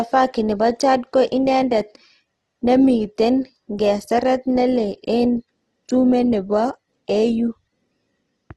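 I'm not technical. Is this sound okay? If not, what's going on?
No. From start to finish the speech sounds grainy and rough, with a fizzy, noisy texture where clean tones should be. The cause is likely Opus compression squeezed too hard. When bits run short, the encoder fills in missing detail with approximations and noise.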